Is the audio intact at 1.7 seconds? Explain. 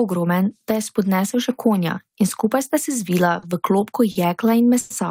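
Yes, at 1.7 seconds the speech plays through cleanly, with no dropout, click, distortion or other fault to be heard at that moment.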